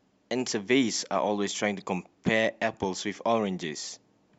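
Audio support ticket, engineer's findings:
Corrupt frame decoded at 1.80 s: bit errors in a few compressed frames, decoder played them anyway. Misread codes produce a brief, faint artifact in the speech.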